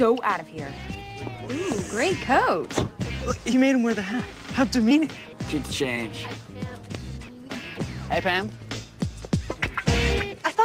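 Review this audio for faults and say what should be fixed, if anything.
No faults found; nothing needs fixing.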